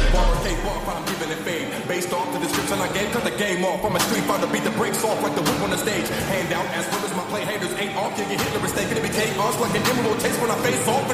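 A corrupt frame decoded at 9.18 to 9.22 s: damaged bits in a few compressed frames misplaced energy across frequencies, giving a brief chirp-like burst peaking around -15 dBFS.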